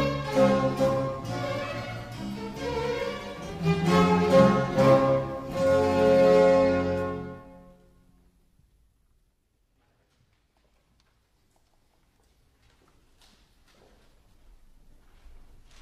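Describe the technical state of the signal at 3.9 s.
At 3.9 s the signal is intact, with no audible fault at that point.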